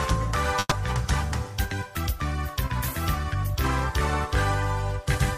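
At 0.59 s there's a burst of packet loss running to about 0.73 s. Roughly 120 ms of audio never arrived, so the receiver stretched the last sound and faded it, leaving a smeared tail and a brief 20 ms silence before the audio picks up further along.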